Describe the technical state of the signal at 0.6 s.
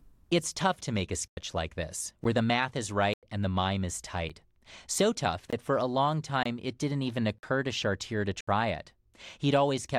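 At 0.6 s the speech signal is intact, with no audible dropout, distortion or other fault at that moment.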